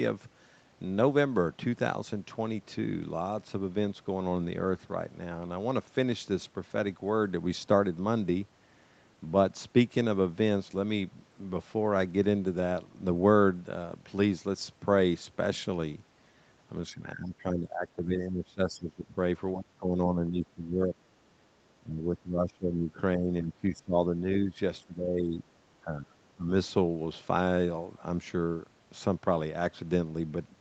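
An echo canceller, likely confused by both sides talking at once, could not tell this talker from its own loudspeaker echo and turned the speech down. That is speech suppressed in double talk. The speech sinks in six stretches: 16.9–19.17 s, 19.54–20.93 s, 21.8–22.98 s, 23.16–24.58 s, 24.82–25.48 s and 25.81–26.51 s. The level drops by up to about 20 dB, only about 10 dB in the fifth, and recovers between stretches. Through all of it the sound stays within a band that already ends near 8 kHz.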